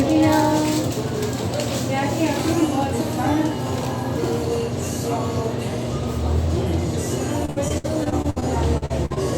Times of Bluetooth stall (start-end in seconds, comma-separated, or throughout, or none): none